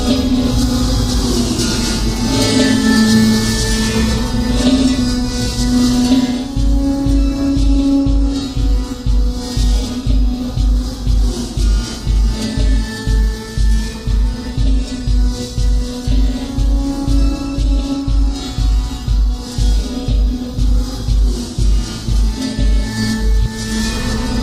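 No technical fault can be heard at any point in this sound recording. Nothing in the audio stands out as having gone wrong.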